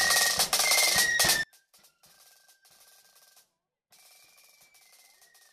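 At 1.43 s the audio abruptly drops by about 35 dB until the end, waveform collapsing to a thin trace and spectrogram dimming across all bands, likely one channel inverted cancelling in mono.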